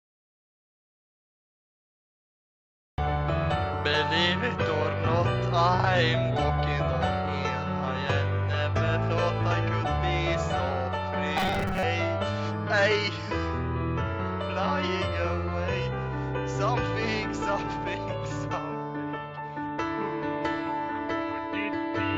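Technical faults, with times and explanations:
11.38–11.83 s, robotic sound from repeated short buffers: the sound becomes a rigid, metallic buzz locked at 188 Hz that only loosely follows the original. The likely cause is audio arriving too seldom, so a 5.3 ms slice was looped in place of about half the real signal.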